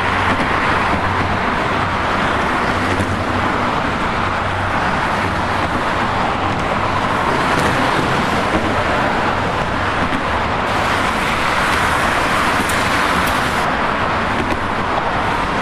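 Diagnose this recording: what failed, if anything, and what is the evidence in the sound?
Pre-emphasis left on, from 10.67 s to 13.65 s. The treble jumps up and the sound turns thin, bright and hissy. The rise matches a 50 µs FM curve, about 11 dB at 10 kHz relative to 1 kHz. The boost was applied before transmission, but the playback stage never applied the matching de-emphasis cut.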